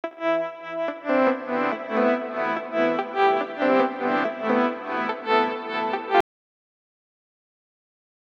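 An audio dropout to silence begins at 6.21 s and runs to the end of the clip, about 2.1 s in all. The sound cuts off abruptly mid-flow and what follows is flat digital silence, with no room tone or background hiss underneath. That total absence points to the input signal being lost, likely through a disconnected device, a failed link or an accidental mute, while the recorder kept writing silence.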